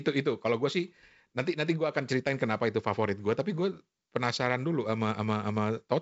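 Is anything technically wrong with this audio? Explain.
No, nothing in this speech stood out as a technical problem on listening.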